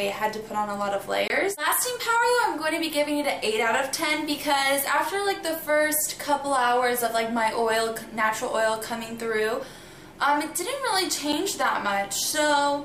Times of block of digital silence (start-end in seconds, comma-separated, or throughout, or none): 1.28-1.30, 11.32